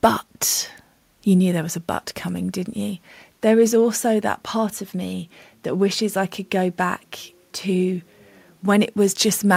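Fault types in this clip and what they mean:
No fault types are present in the clip.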